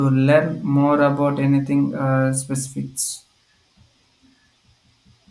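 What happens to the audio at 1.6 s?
Nothing goes wrong at 1.6 s; the speech carries on intact through that moment, with no dropout, click or distortion to be heard.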